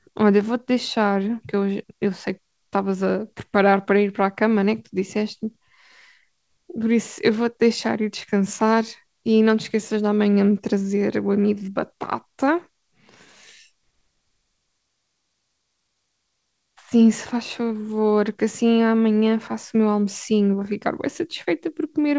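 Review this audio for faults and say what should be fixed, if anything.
No faults found here; nothing needs fixing.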